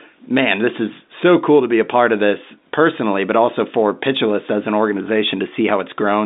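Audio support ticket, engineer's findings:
No faults found; speech sits within the expected G.711 telephone coding band of roughly 200 Hz to 3.7 kHz.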